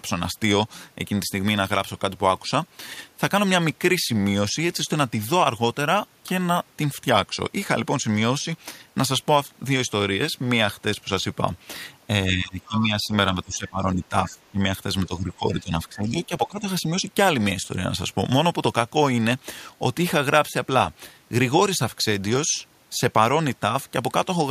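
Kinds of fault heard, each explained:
Speech suppressed in double talk: Between 12.28 and 16.67 s the speech repeatedly sinks in level, by as much as about 15 dB, in four stretches at 12.28–13.12, 13.43–14.64, 15.06–15.72 and 15.89–16.67 s, with the dip covering most of each. The likely cause is an echo canceller that, with both ends talking at once, could not tell this talker from the returning loudspeaker echo and turned the outgoing signal down.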